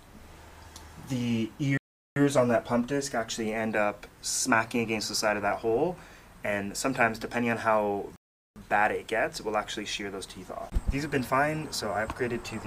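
At 1.77 s the sound drops to silence and stays silent until 2.16 s. This is a rebuffering stall. The player ran out of downloaded audio and had to wait for more to arrive. Playback then picks up exactly where it stopped. Nothing is skipped, but about 0.39 s of dead air is inserted. The same stall happens again from 8.16 s to 8.56 s, adding a further 0.40 s of silence before the sound resumes seamlessly.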